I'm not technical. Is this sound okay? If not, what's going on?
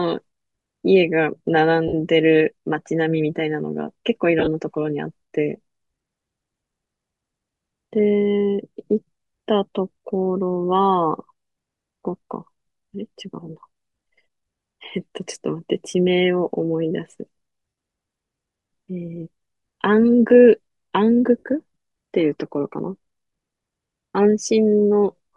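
No. The speech sounds breathy and grainy throughout, likely from Bluetooth LC3 compression, which squeezes the sound and fills lost detail with hiss.

There are also lost LE Audio frames, brief dropouts smeared into noise, at 1.88–1.94 s, 4.39–4.48 s, 17.69–17.77 s and 21.38–21.43 s.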